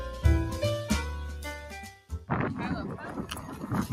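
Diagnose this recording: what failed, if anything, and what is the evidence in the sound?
The sound pumps and thins across the whole clip: held parts sink while sharper onsets punch through, so the level swings by something like 10 dB and tails flutter away instead of decaying naturally. This points to call processing, a noise suppressor applied to music or sounds. It was designed for speech, so it treats sustained tone and ambience as noise and keeps pulling them down, leaving only the transients at full level.

Between 1.94 and 2.29 s, one stretch of sound is cut by the noise suppressor. It drops harder than its surroundings, about 7 dB at its deepest, and the affected region runs to roughly 0.4 s in total, so it sounds hollowed out before recovering. The suppressor's estimate classed this steadier or fading material as noise and applied extra gain reduction, lowering its level and cutting its decay short while anything abrupt would have passed.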